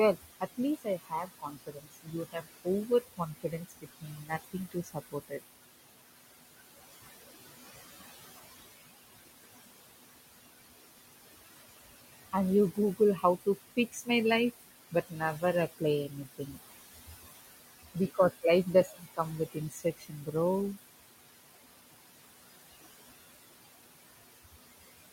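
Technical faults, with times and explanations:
throughout: noise suppressor artifacts. The room noise, about 12 dB under the speech, sinks between phrases and swells under them, because the suppressor pulls steady-noise bands down by about 18 dB frame by frame.
0.16–5.43 s, 12.74–14.09 s (right after "and you"), 14.91–15.43 s, 15.78–16.62 s, 17.94–19.19 s, 19.52–20.35 s: speech cut by the noise suppressor. Soft consonants and word endings sound swallowed, dipping up to about 21 dB over roughly two seconds in the first span, because the suppressor mistook quiet speech for noise.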